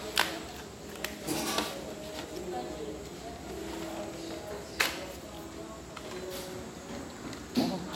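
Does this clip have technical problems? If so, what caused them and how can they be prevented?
No, nothing in this audio points to a technical fault, so there is nothing here to trace back or prevent.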